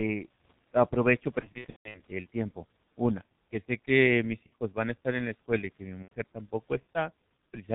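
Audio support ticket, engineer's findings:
G.723.1 codec, whole clip: muffled, hoarse speech, nothing above 4 kHz, smeared consonants. Consistent with 30 ms frames, slowly updated voice model; the heavy damage fits a rate near 6.3 kbit/s.

VoIP packet loss concealed by the speech codec, 1.41–2.01 s, 4.46–4.54 s, 6.03–6.11 s: extrapolated buzzy tone or coloured noise, fading. First burst has roughly 0.33 s of gaps across 0.54 s (longest 0.15 s). Weak voice lingers after recovery.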